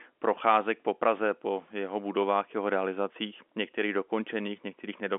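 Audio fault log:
The audio fault log has no entries for this clip.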